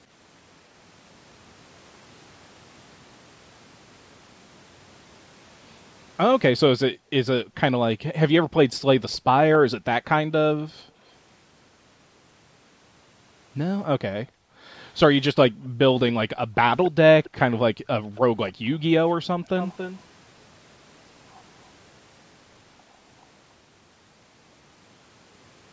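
Background gated by the echo canceller at 6.9–8.15 s, 10.67–10.97 s, 14.25–15.78 s and 17.73–19.42 s: while the far end plays, the microphone is pulled down by about 40 dB, so the room sound drops out briefly. A faint copy of the speech trailing by 279 ms appears at 9.13 s, 16.84–18.51 s and 19.57–20.01 s, at about 35, 20 and 15 dB below the speech. This is likely an echo leak, loudspeaker pickup the canceller failed to remove.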